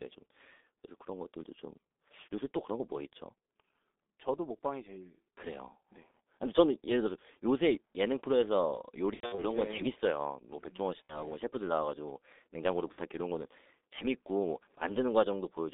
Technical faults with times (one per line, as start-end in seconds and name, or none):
0.00-15.73 G.723.1 codec
6.11-6.17 VoIP packet loss concealed by the speech codec
9.14-9.45 VoIP packet loss concealed by the speech codec
11.05-11.18 VoIP packet loss concealed by the speech codec
12.92-13.00 VoIP packet loss concealed by the speech codec